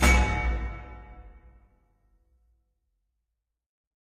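An adaptive stream starting at a low bitrate plays a cheap version until 2.53 s, so the sound is dull, with nothing above 14.9 kHz, before jumping cleanly to fuller quality.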